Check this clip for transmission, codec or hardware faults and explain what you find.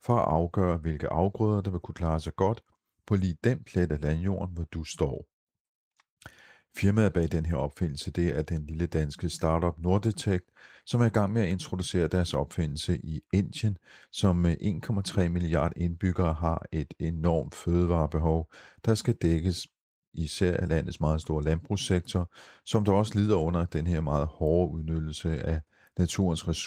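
No transmission, codec or hardware fault turns up anywhere in the speech. The Opus voice compression is running in hybrid mode at full bandwidth and 24 kbps, and it leaves only light coding damage on the sound.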